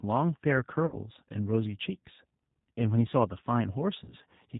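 Speech runs through the G.729 codec at 8 kbit/s throughout, and the damage is plainly audible. The voice has a rough, slightly synthetic quality because it is rebuilt from a vocal tract filter, a pitch predictor and a few pulses per frame rather than from the actual waveform. On a spectrogram, everything above 4 kHz is empty, and harmonics look smeared and grainy rather than cleanly striated. Two bursts of VoIP packet loss concealed by the speech codec occur. The first runs from 0.86 to 0.97 s and covers about 60 ms of missing audio, which fits three lost 20 ms packets. The second runs from 4.04 to 4.15 s and covers about 40 ms, which fits two. In each gap the decoder keeps repeating its last pitch and filter at falling gain, so the sound is stretched into a buzzy tone or coloured noise that fades. On a spectrogram this appears as frozen bands that dim across the gap. The waveform shows a shrinking pattern. 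The recovery right after each gap stays weak or distorted, because every frame is predicted from the one before it.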